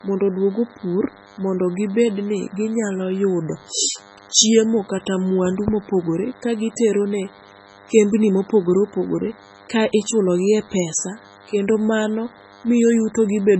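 A thin, steady buzz sits under this speech recording from start to finish, pitched at 100 Hz with a dense stack of harmonics and roughly 25 dB below the speech. It is DECT cordless phone buzz: a nearby handset or base station transmits a burst every 10 ms, and the audio circuitry rectifies that radio energy into sound. The speech is also watery and swirly, with smeared consonant attacks, metallic chirping on sibilants and nothing above 8 kHz. This is most likely heavy MP3 compression at a very low bitrate, around 16 kbps, where the encoder cuts the treble and lets weak frequency components flicker between frames. From 0.30 s to 13.22 s, faint ticks recur at a steady pace of about one every 0.4 s, around thirty in all. These are clock slip clicks, likely from two unsynchronised clocks differing by roughly 50 ppm, so that a single sample is dropped or repeated at each slip.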